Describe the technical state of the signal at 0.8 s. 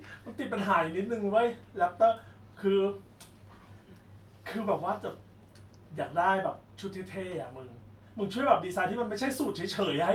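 At 0.8 s the speech signal is intact, with no audible fault at that moment.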